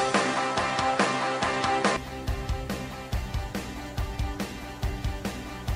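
From the start to about 1.97 s, the recording was likely coming from a poorer input device before switching over. That device passes nothing above about 10.5 kHz, so this opening stretch sounds duller and boxier, with a faint background noise of its own and a modestly different level. At 1.97 s the sound opens up and clears at once, with no silence at the switch.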